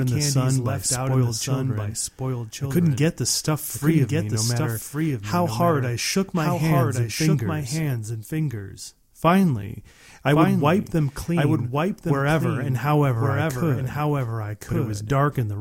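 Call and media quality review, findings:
Doubled audio track, whole clip: the speech repeats about a second later, a few dB quieter, full-band and dry with no room tail. Likely a second capture path or out-of-step edit mixing in a delayed copy.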